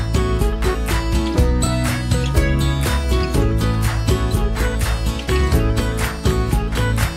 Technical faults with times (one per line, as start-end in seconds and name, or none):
none